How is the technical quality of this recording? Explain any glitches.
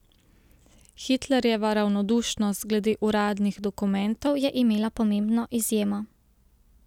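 The recording has one glitch near the end. From 4.27 s to 6.82 s there is a wrong sample rate fault. The samples play back faster than they were captured, with no conversion between rates. The ratio fits audio recorded at 44.1 kHz but played at 48 kHz. Speed rises by about 1.09 times. Pitch climbs by roughly 1.5 semitones. The speech in that stretch sounds slightly high and hurried.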